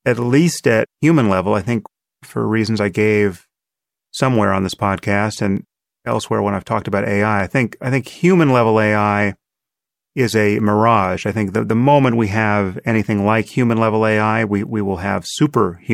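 From 1.92 s, just after "human level I think", a click recurs every 1.83 s through to 14.69 s, about seven in all. This pattern is a clock drift buffer slip, likely caused by two devices running on independent clocks that differ by a couple of hundred parts per million. The buffer between them gradually drifts until a short block of samples, on the order of fifteen, is dropped or repeated, producing a regular tick over the speech.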